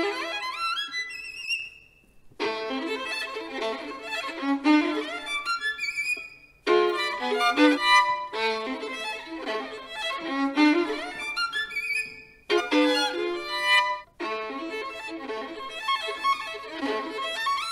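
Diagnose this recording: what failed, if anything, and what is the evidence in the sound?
Storage or digital link: a bit error spike at 6.90 s, one single-sample tick, broadband and unrelated to the signal, from a flipped bit briefly jumping the sample value.

Codec or storage: compressed frames skipped at 7.73, 12.56, 14.00, 15.07 and 16.14 s. Each is a jump ahead where roughly 0.2 to 0.7 s of audio vanishes, which fits dropped frames of about 46 ms.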